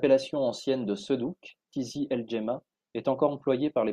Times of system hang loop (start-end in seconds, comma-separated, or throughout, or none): none